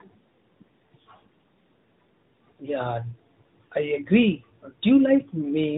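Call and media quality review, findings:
Tandem speech coding, throughout the clip. Rough, muffled, warbly speech. Probable components: G.726 32 kbit/s leg, then G.711 mu-law transit, then AMR-NB 12.2 kbit/s. Two lossy speech coders in series, the second re-encoding the first's decoded errors. Spectrogram: hard ceiling near 3.8 kHz, smeared formants, blurred harmonic striations. Waveform: little visible change.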